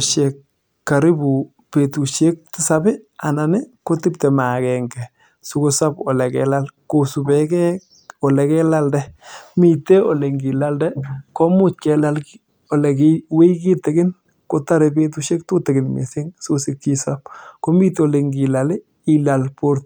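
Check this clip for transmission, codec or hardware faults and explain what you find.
No transmission, codec or hardware faults turn up in this clip.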